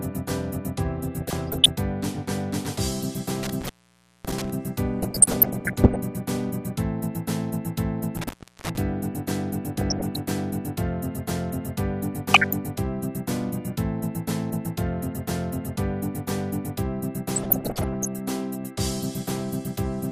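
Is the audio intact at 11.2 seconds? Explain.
No. At 11.2 seconds, as across the whole clip, the sound is dull, with a gurgling, granular roughness, likely from MP2 compression at a rate that fits roughly 80 kbps. Short of bits, upper sub-bands flicker off and the remaining bands are coarsely quantised.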